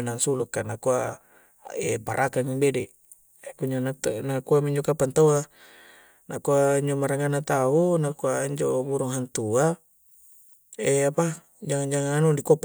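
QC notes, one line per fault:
Nothing stood out on listening to the speech in this clip.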